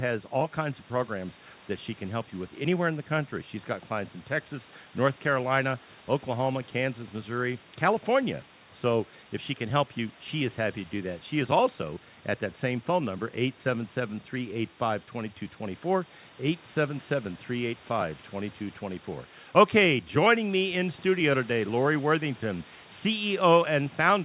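No technical faults can be heard in this speech. Room noise sits about 26 dB below the speech, and nothing reaches above 4 kHz, which fits a narrowband call path such as G.711.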